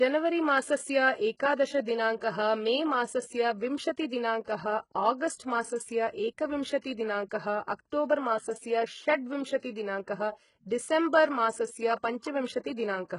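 The whole speech clip carries heavy HE-AAC compression, likely at a very low bitrate, somewhere around 12 kbps. Nothing comes through above 11 kHz, and the rebuilt treble makes the s sounds gritty and lispy. Pre-echo turns up from 2.16 to 2.22 s and again from 6.80 to 6.84 s. Codec noise smears ahead of a sharp attack as a brief hiss lasting 56 ms the first time and 38 ms the second, which softens each onset.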